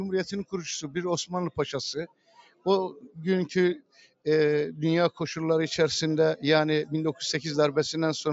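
A noise suppressor applied to music or sounds runs through the whole clip. It treats held tones and tails as noise and pulls them down. Attacks get through. The level swings by around 10 dB, so the sound pumps and thins.

At 1.15 s there is a bit error spike. A single sample jumps by a power of two and snaps back. It is heard as one sharp, broadband tick with no link to the surrounding sound.

Sound cut by the noise suppressor follows at 2.07 to 2.66 s, 2.94 to 3.17 s and 3.79 to 4.26 s. Sustained material sinks there, by about 21 dB at worst in the first and third spans and about 14 dB in the second. Decays are cut short.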